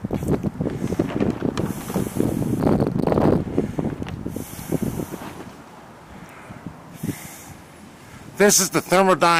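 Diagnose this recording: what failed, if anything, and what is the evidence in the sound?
Nothing in the recording points to a failure at any stage of the chain. There is no event in the sound that calls for a diagnosis.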